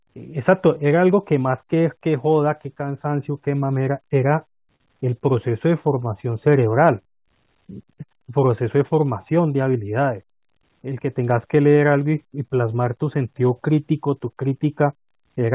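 At 4.76 s the speech briefly hangs: a short stall from a late packet. The jitter buffer ran dry, so the receiver stretched the last sound by about 40 ms until the packet arrived at 4.87 s, then resumed with nothing lost, leaving a held sound within audio band-limited to 4 kHz, consistent with G.711 A-law.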